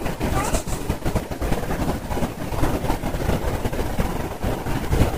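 Brief blips at 1.20 s and 4.85 s come from damaged data in a compressed stream: corrupted bytes made the decoder misread frames and lose sync momentarily.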